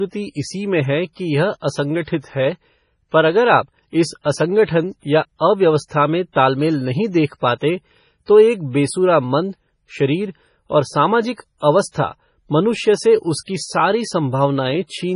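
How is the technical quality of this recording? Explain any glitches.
Quality is poor: the speech carries heavy MP3 compression damage all the way through. The likely cause is an encoder starved of bits, which fits a very low rate near 24 kbps. It cut everything above 10.6 kHz and kept dropping weak frequency lines frame by frame, leaving the speech dull, watery and swirly, with smeared onsets and metallic edges on s sounds.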